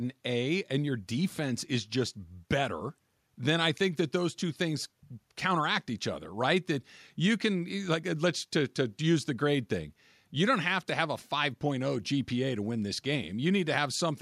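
A short recording of speech, with no technical fault to be heard anywhere in it. There is nothing here that needs a time or a cause.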